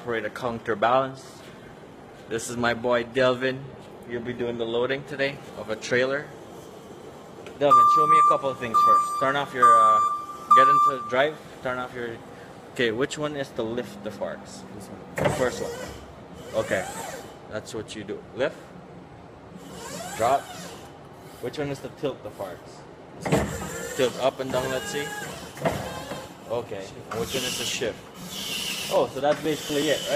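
Adaptive stream starting at a low bitrate, 0 to 6.0 s: the player opened on a low-bitrate version, which fits HE-AAC near 20 kbit/s, so treble sounds synthetic and artefacts are stronger. Quality then steps up abruptly without a gap, reaching up to 14.9 kHz, consistent with AAC-LC at 96 kbit/s.

Periodic USB or driver dropouts, 27.11 to 30.07 s: something repeatedly stalled the audio path every 0.123 s, skipping about 2 ms of sound each time. The result is a steady train of roughly thirty small ticks, evenly spaced and audible only where signal is present.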